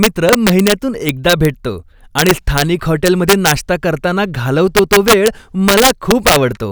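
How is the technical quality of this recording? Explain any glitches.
The technical quality is poor. Integer overflow strikes the speech at 0.03–0.72, 1.09–1.45, 2.19–2.62, 3.06–3.51, 4.77–5.28 and 5.68–6.36 s. Loud peaks overshoot the limit by about 1 to 5 dB and wrap to the opposite sign. They become violent cracks, harsher than clipping.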